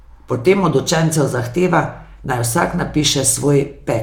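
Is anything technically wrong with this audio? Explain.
No, no technical faults audible.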